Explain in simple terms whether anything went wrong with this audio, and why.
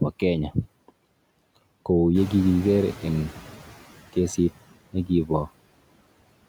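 Two things went wrong, both caused by the noise suppressor, the processing meant to clean up background sound.

First, noise suppressor artifacts run through the whole speech clip. The suppressor keeps turning down whatever it decides is steady noise, slice by slice. The background drops away in the gaps between words and creeps back in underneath them. That pumping in step with the talking is what sets it apart from ordinary room noise, which would stay level.

Second, there is a stretch of noise suppressor catching up from 2.14 to 3.81 s. The background noise in the room gets suddenly louder around two seconds in. That rise belongs to the recording itself and is not a fault. The suppressor was still working from its picture of the quieter room, so the louder noise first comes through with less reduction. It then settles down over roughly 1.7 seconds as the suppressor adjusts. Unlike the constant pumping, this happens once, right after the change, and fades on its own.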